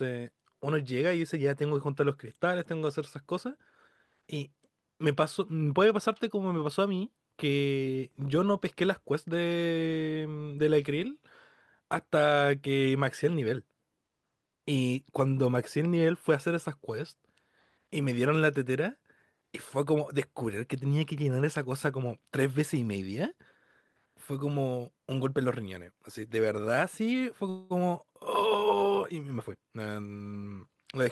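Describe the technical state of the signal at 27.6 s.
At 27.6 s the speech is interrupted by a call audio freeze, running from 27.49 to 27.72 s. The last sound is stretched into a fading buzz or hiss for about 210 ms, with no silent stretch. The likely cause is packets held up in transit, leaving the jitter buffer empty while the receiver filled the gap. When audio resumes, it picks up where it stopped. Nothing is lost, but everything after plays about 210 ms later.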